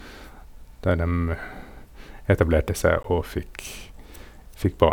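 At 3.03 s a block of digital silence drops about 15 ms of the speech to silence, likely from an unfilled output buffer, leaving a tick or dip.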